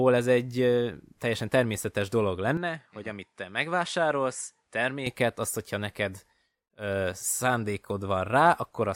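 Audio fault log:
2.57 to 5.06 s, input switched to a poorer device: just after "teljesen természetes dolog" the speech goes duller and a little quieter, about 5 dB down, with a new noise floor roughly 50 dB below it. The change is likely a switch to another microphone or headset path whose narrower band stops at 11 kHz. There is no gap at the switch. On a spectrogram the energy above 11 kHz is cut off across this span, and on the waveform the envelope is slightly lower. Full brightness returns before "azt hogyha neked ö".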